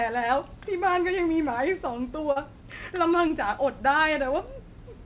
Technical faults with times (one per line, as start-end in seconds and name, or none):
2.32-2.38 short concealed packet loss
3.28-3.32 short concealed packet loss